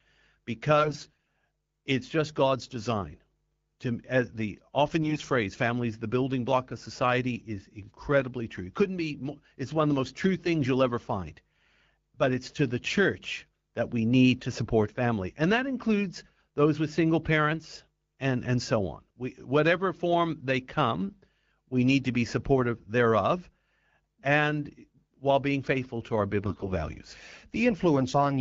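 AMR bit errors strike at 0.78–1.28 s, just before "it's just"; at 5.02–5.24 s, between "as the often" and "phrase families the building"; and at 26.45–26.69 s, after "being faithful to our". Roughly one bit in ten is flipped, and about one in twenty in the middle burst. The flips land in the weakly protected bits, scrambling the excitation pulses and fine parameters. Pitch and level hold while the speech turns scratchy and gargly, unlike packet loss, which mutes or smears. The underlying AMR-WB coding at 12.65 kbit/s remains clear.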